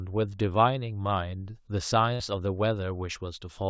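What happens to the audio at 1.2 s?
Nothing goes wrong at 1.2 s: the speech passes through intact, carried by the call path's wideband coding with its usual band limit at 8 kHz.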